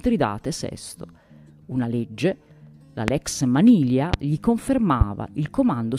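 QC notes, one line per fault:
3.08–3.11 s, 4.14–4.16 s and 5.01–5.04 s, loud pop: Three separate sharp pops, each about 30 ms long, sit on top of the sound, which carries on underneath. The first two peak about 20 dB above the surrounding level. The last is a little softer, about 15 dB above. Each is a single pulse. The likely cause is a sudden voltage spike from a switch, plug, static discharge or driver glitch, which the following circuitry shapes into a brief thump.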